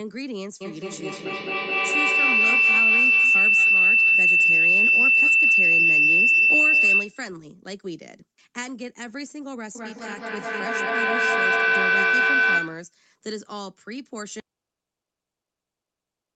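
Feedback howl runs from 0.61 to 7.39 s and again from 9.75 to 12.99 s. Two devices in the same room share the call, so the sound leaving one loudspeaker re-enters a microphone and comes back louder on each pass. Instead of dying away, the repeats narrow to a tone near 3 kHz in the first episode, peaking about 15 dB above the speech. In the second the tone sits near 1.5 kHz and reaches about 13 dB above the speech. Both pulse at roughly 200 ms, the loop's round-trip delay.

An audio dropout to a faint residue starts at 14.40 s and lasts to the end. The speech cuts off abruptly, and what remains is mains hum about 55 dB below the signal. The likely cause is that the wanted signal was lost while the input after the break stayed open, leaving only its own hum.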